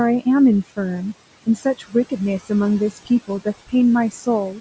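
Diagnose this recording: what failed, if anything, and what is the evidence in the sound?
The failure is in the call processing stage, where the noise suppressor is producing noise suppressor artifacts. The room noise, sitting about 18 dB under the speech, gets pulled down by about 17 dB in the gaps and comes back up under the talking, so the background pumps all the way through, with the gain being set band by band on every frame.

Between 1.44 and 2.12 s there's speech cut by the noise suppressor. It misread some of the quieter speech as noise and turned it down with the background, by about 18 dB at the deepest point. Only about a fifth of a second in that window is actually hit, so the quieter speech there comes across as swallowed or faint rather than dropping out completely.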